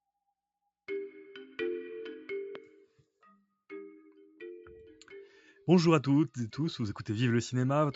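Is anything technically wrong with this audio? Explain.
Yes, there is one loud pop, from 2.55 to 2.58 s. A sudden voltage step or pulse, likely from a plug, switch, static discharge or driver glitch, was added to the signal for about 20 ms, and the circuitry after it shaped that pulse into a short burst. It is heard as a single sharp pop peaking a few decibels above the surrounding audio, with the sound continuing underneath. The call microphone processing that limits the audio to below 8 kHz is normal.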